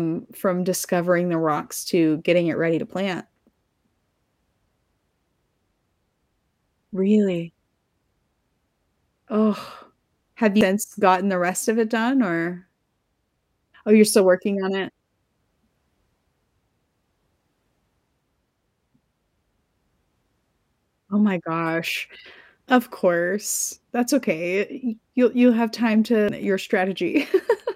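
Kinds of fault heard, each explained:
CD skip: the laser jumps to another turn of the disc's spiral, so the player mutes for a few milliseconds, ticks, and resumes the speech from a different point. It happens at 10.61 s, just before "gotten the rest of", and at 26.29 s, just after "you'll you'll have time". Unlike a plain dropout, which only leaves a gap, the speech continues out of sequence, displaced by whole disc rotations.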